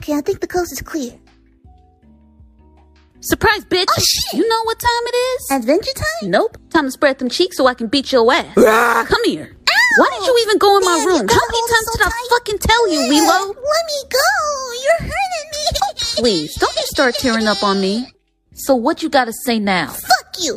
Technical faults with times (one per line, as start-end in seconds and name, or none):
none